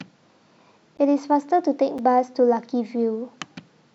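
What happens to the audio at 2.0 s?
At 1.98 s a block of digital silence cuts in for 5.8 ms, consistent with an unfilled 256-sample buffer; abrupt edges make a single tick rather than a faded dropout.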